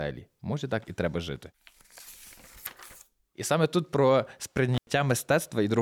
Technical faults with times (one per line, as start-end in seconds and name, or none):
4.74-4.90 intermittent contact